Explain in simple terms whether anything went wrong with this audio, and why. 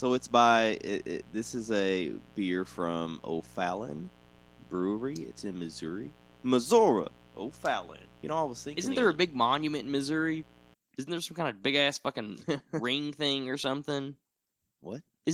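A mains buzz runs under the speech from the start to about 10.7 s, then stops. Electrical interference from the 60 Hz power supply leaked into the recording, adding a steady, raspy hum that sits below the speech.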